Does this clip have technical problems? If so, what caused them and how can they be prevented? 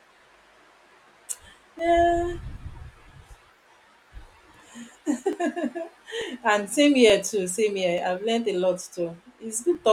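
Yes. Clock drift buffer slips run from 0.91 s to 9.75 s: a click about every 0.89 s, roughly ten in all, steady as a metronome through the speech. The regular spacing likely comes from two devices on independent clocks, mismatched by something like 700 ppm, so the buffer between them drifts until a chunk of a few tens of samples is dropped or repeated, producing each click. To prevent it, lock both devices to a shared clock or use adaptive resampling between them.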